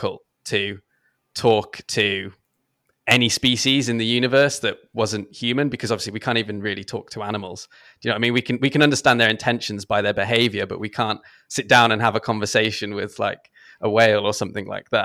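Listening through the speech, nothing stood out as a technical fault at any point.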